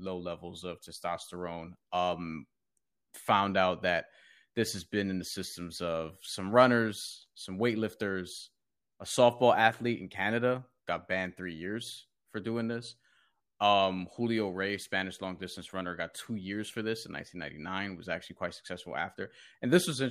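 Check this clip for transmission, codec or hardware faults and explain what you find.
No transmission, codec or hardware faults.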